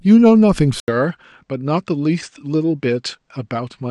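Speech recording. At 0.8 s, an 80 ms silence, then duller, quieter sound with nothing above 8.9 kHz. Input likely switched to a poorer device.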